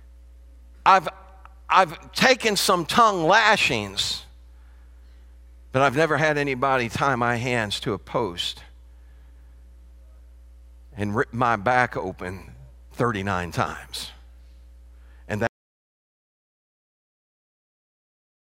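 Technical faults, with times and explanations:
15.47–18.41 s, audio dropout to silence: the speech cuts off mid-flow and the last 2.9 seconds are silence, with no room tone at all. The likely cause is a lost input, such as a disconnected device or a mute, while recording continued writing silence.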